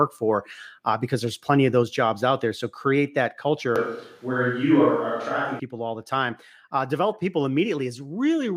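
Microphone volume stepped down at 1.83 s, between "because there's plenty of" and "jobs out there": voice and background drop suddenly by about 3 dB, likely software lowering the input volume.

Switch to a distant microphone from 3.76 to 5.60 s, after "create that" and before "all the time": the voice turns abruptly roomy and thinner in the bass, with a faint room noise well below it, at much the same level. The likely cause is the recording falling back to a microphone farther away.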